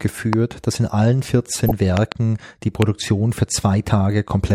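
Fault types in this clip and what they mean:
Loud pop: sharp electrical pulses, likely from a plug, switch or static discharge, rising well above the speech; tall isolated waveform spikes and thin broadband vertical spectrogram lines.
DAB burbling: weak-reception bit errors slip into the digital audio, putting short blips of noise in single frequency bands near 1.7 s; spectrogram shows scattered, blocky patches.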